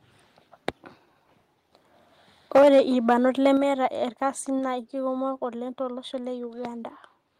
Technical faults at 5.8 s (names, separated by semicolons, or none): none